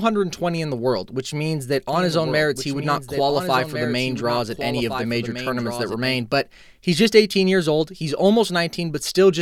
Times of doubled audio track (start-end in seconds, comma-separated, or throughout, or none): 1.93-6.15